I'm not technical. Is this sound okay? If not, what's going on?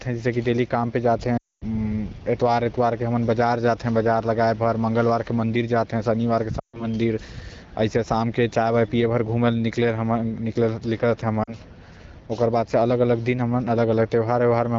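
No, there are three short dropouts: lost AMR speech frames. Radio errors wiped out bits of the call, so the phone padded each gap by stretching the last good sound while fading it. You can hear this at 1.37 to 1.64 s, 6.59 to 6.85 s, and briefly at 11.43 to 11.55 s.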